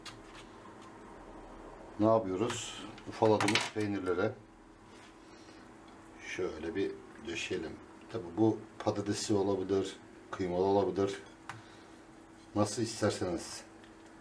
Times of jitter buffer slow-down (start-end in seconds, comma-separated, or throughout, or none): none